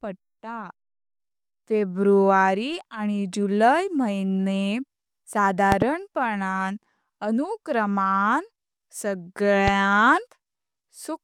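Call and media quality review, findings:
Loud pop, 5.72–5.84 s: double pop, two sharp transients in quick succession, peaking about 20 dB above the speech, which continues underneath. Likely a connector or switch contact making twice, each voltage step shaped by downstream circuitry.

Loud pop, 9.68–9.70 s: single short pop, roughly 15 dB over the speech. Likely a static discharge or driver glitch injecting one pulse into the path.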